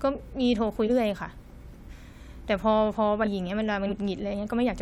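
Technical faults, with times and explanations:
0.86–0.90 s, 1.88–1.91 s, 3.23–3.27 s and 3.88–3.92 s, compressed frames skipped: at each point the speech jumps forward, dropping roughly a fifth of a second, about a second, about 0.7 s and about a tenth of a second respectively. The gaps fall in whole steps consistent with a compressed frame of about 46 ms. Those frames were missing or rejected by the decoder.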